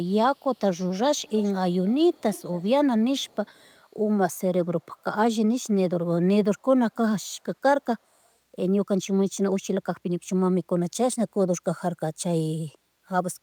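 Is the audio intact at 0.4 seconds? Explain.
No, not quite. From 0.35 to 0.59 s there's an echo leak: a very faint copy of the speech trailing about 175 ms behind. That's likely a loudspeaker on the far end whose echo canceller let some of its mic pickup slip back.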